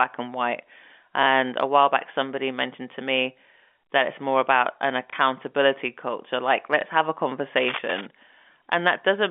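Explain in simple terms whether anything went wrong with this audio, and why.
Two things went wrong in this telephone-quality speech recording. The first is packet loss with the last packet repeated. Twice, a small chunk of the digital stream never arrived, and the receiver filled the gap by playing the previous chunk again. This happens at 5.1 s, right after "it's more about an", and at 6.81 s, just before "have a". Each gap lasts 30 ms, which fits one lost 30 ms packet. Because the repeated piece doesn't join smoothly with what's around it, you hear a small blip.

The second is cable scratch noise, from 7.57 s to 8.06 s, just after "have a". The likely cause is a worn cable, plug or control being moved, so its electrical contact flickered rapidly. That adds a burst of scratchy, rustling crackle on top of the speech for about half a second, fairly loud compared with the voice. The narrow, phone-like sound throughout comes from the ordinary telephone coding, which is working as intended.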